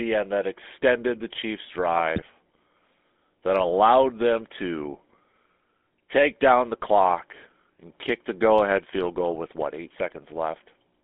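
GSM full-rate codec, throughout: the speech passes through a low-rate vocal-tract model with pulse excitation, which fits a 13 kbps GSM full-rate stream, leaving a plainly buzzy, gravelly roughness within a 200 Hz to 3.6 kHz band. GSM bit errors, 2.16 to 2.29 s: corrupted filter, pitch and gain values across roughly six 20 ms frames distort the decoded spectrum and level, producing a brief squawking, gargling burst.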